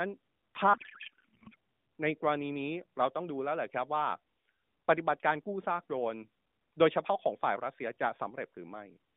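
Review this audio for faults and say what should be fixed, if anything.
From 0.74 to 1.55 s the speech is replaced by garbled noise and warble that barely tracks it. This is a codec payload misread: the receiver parses AMR frames with fields shifted, which points to octet-aligned payloads read as bandwidth-efficient. The narrowband AMR path around it carries only light codec damage, consistent with 12.2 kbps. To prevent this, negotiate and enforce the same AMR payload format (the octet-align parameter) on both ends of the session.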